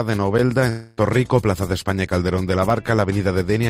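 The audio most likely lost its incoming stream for a stretch, a long network dropout lasting from 0.69 s to 0.99 s. For about 280 ms nothing new was played. The receiver instead kept extending the last sound it had, so the gap comes across as a smeared, fading buzz rather than true silence. When the stream resumes at 0.99 s, the audio picks up further along, and the material from that interval is gone for good.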